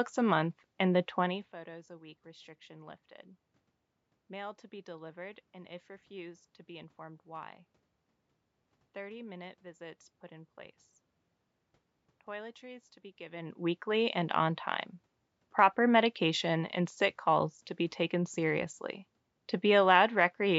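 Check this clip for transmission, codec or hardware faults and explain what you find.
No faults are audible: the signal stays continuous and intact, with the call microphone processing's high-pass filter removing only the lowest bass, no content above 8 kHz, room noise underneath, and level changes shortly after the start and again a little past the middle that come from the talker moving relative to the microphone.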